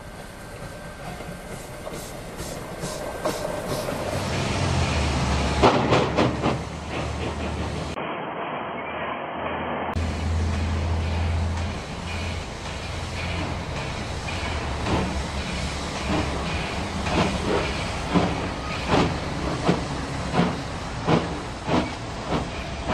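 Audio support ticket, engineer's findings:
Sound turns dull and boxy 7.94–9.96 s, nothing above 3.2 kHz, brief 20 ms dropout at the switch, new faint noise floor, level about unchanged. Likely input switched to a poorer device, whose narrower band and own noise replace the original capture path.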